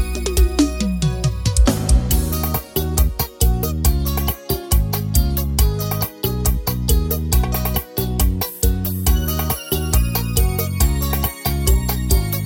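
No technical faults can be heard anywhere in this audio.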